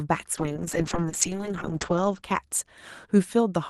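Speech carried over an Opus call path suffers a call bitrate drop from 0.39 s to 3.29 s. The top end closes in from 12 kHz to 8 kHz, and the sound turns rough and watery, worst for about 1.1 s, which points to the encoder falling from around 32 kbps to 6 kbps. Unlike packet loss, nothing drops out or repeats. Unlike a fixed low-pass filter, the coarse texture comes with the narrowing and recovers with it.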